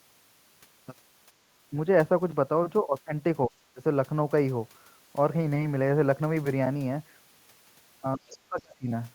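Speech suppressed in double talk appears from 3.48 to 3.8 s, where the talker's voice briefly dips by about 25 dB, likely because the echo canceller, hearing both sides at once, mistook the talker for loudspeaker echo and turned everything down. The same speech suppression in double talk returns from 8.16 to 8.9 s, deeper at about 30 dB and covering most of that stretch, so the voice dips there. Within it, from 8.3 to 8.38 s, the other side's voice leaks through as a faint scrap about 25 dB below the speech, likely loudspeaker sound that the canceller left in the microphone signal.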